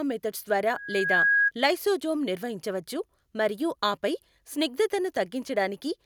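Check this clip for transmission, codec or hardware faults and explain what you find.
One fault stands out. From 0.66 to 1.51 s a pure tone near 1.6 kHz swells over roughly half a second until it sits about 5 dB above the speech. This is loudspeaker feedback squeal: the microphone picks up its own loudspeaker and the loop's gain exceeds unity at that frequency.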